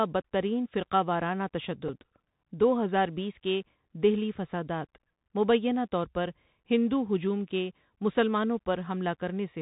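The whole clip runs through the Bluetooth CVSD headset codec, so nothing gets above 4 kHz, esses turn scratchy, and a grainy hiss sits under the speech. At 1.88 s there's a Bluetooth headset packet repeated: about 7.5 ms went missing, which fits two lost packets, and replaying the old bits leaves a tiny buzzy tick.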